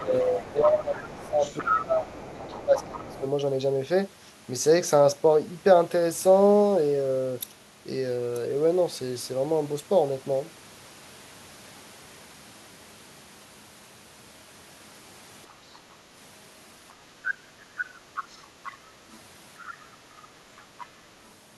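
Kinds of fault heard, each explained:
Other side's voice leaking through: A second, quieter voice sits under the talker in short patches near the start and again from about 17.3 to 20.9 s. It runs roughly 10 to 35 dB below the main speech. The likely cause is loudspeaker echo that the echo canceller left in.
Speech suppressed in double talk: During the first few seconds, while that other voice overlaps, the talker's level dips by up to about 15 dB, over 0 to 2.04 s and 2.52 to 3.22 s. Likely the echo canceller turned both voices down together.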